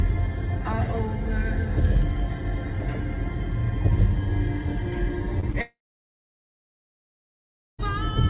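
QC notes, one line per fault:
5.40–5.49 s and 5.52–5.55 s, short concealed packet loss: about 20 ms goes missing each time, and the decoder patches it by extending the last sound, leaving a brief smear or wobble.
5.61–7.80 s, long network dropout, likely: the last sound is stretched into a fading buzz or hiss, then about 2 s of silence, and the audio resumes later with that stretch gone.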